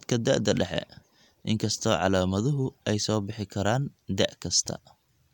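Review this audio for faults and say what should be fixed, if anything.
No faults found; nothing needs fixing.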